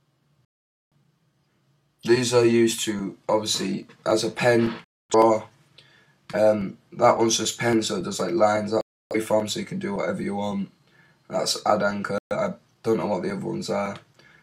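At 0.45 s the audio cuts out until 0.95 s, the first of four digital broadcast dropouts. The others follow at 4.84 to 5.15 s, 8.81 to 9.16 s and 12.18 to 12.36 s. The receiver lost good frames and muted until valid ones returned, leaving holes of about 0.47, 0.26, 0.30 and 0.13 s. Each gap is a multiple of roughly 43 ms, which fits whole frames being discarded, and the programme content during each hole is gone.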